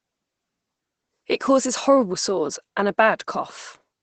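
Throughout the speech there's Opus voice compression: nothing above 8.7 kHz, and that muffled, hoarse, slightly robotic SILK coding points to a low bitrate around 12 kbps.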